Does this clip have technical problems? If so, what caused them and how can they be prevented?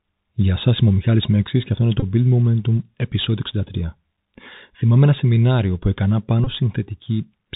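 Yes. Bluetooth CVSD headset codec damage runs through the whole clip: the speech is squeezed through a narrowband link that encodes one bit per sample, step up or step down, at 64 kHz, so nothing above 4 kHz survives. Loud, bright sounds outrun the adapting step and distort, sibilants turn scratchy, and a granular hiss sits underneath. Using a wideband headset profile (mSBC or LC3) or a wired microphone avoids this.

Bluetooth headset packet repeated occurs twice, from 2.00 to 2.04 s and from 6.44 to 6.48 s. Each time, about 22.5 ms of voice packets went missing, which fits six 3.75 ms packets, and the chip decoded the previous packet again, producing a short buzz near 267 Hz. Keeping the headset close to the phone, away from Wi-Fi congestion and body shielding, prevents these dropouts.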